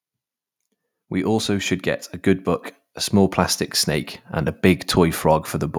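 From 0.95 s to 2.54 s, automatic gain rising is heard. The gain control judged the input too quiet and lifted its level slowly, by about 4 dB. The speech and the background noise swell together over this stretch, rather than the voice alone.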